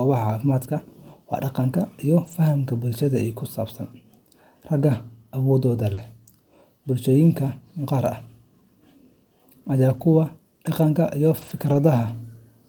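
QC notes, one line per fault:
2.23–2.33 s, 5.97–5.99 s, 9.89–10.03 s and 11.37–11.75 s, lost packet rebuilt from error correction: each stretch turns briefly rougher and noisier, but there's no gap. The missing packets were filled from low-bitrate copies carried in the packets that followed, and the last one runs about 200 ms.
5.93–5.99 s, short concealed packet loss: about 40 ms of the speech arrived too late, so the decoder extended the last sound to cover the hole. That comes across as a quick smear or wobble, and its tail overlaps the error-corrected patch at 5.97 s.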